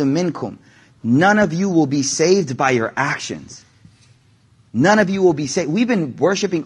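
Low-delay AAC compression runs through the whole speech clip, plainly audible as a rough, grainy texture with a hiss-like fill between the harmonics and a top band that sounds thin and synthetic. The likely cause is AAC-ELD, the low-delay codec used for calls, at a rate that fits about 32 kbps. Its very short frames resolve pitch harmonics poorly, so at this rate the encoder cannot spend enough bits to keep the voice clean.

AAC frame loss with concealment appears from 0.39 to 0.42 s as a brief smeared, noisy patch. One block of coded audio never reached the decoder, which fits a single lost frame of about 20 ms. The decoder filled the gap by reusing and reshaping the last good spectrum rather than leaving silence, so the moment sounds phasey and blurred.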